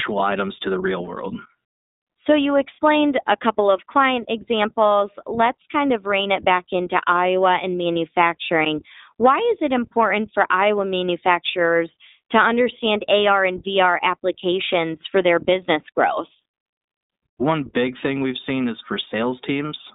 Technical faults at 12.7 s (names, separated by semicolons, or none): iLBC codec